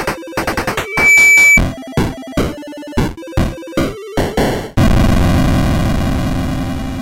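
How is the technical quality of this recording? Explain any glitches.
There's one clear glitch, a burst of loudspeaker feedback squeal from 0.84 to 1.61 s. The mic caught the speaker it was feeding, and the loop gain at 2.3 kHz went past one. That tone swells over roughly a third of a second into a piercing whistle, sitting around 10 dB above the rest of the audio until it cuts off.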